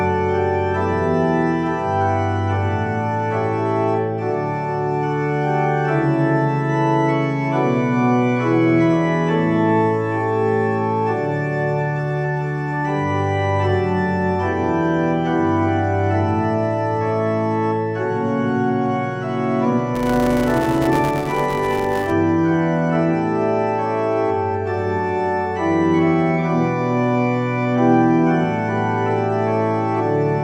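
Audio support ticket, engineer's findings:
Filter restarted on every block, 19.95 to 22.12 s. Steady 200 Hz buzz riding on the audio and tracking its level. Filter stage loses state at each block boundary and starts from silence, leaving a small transient every 5 ms block.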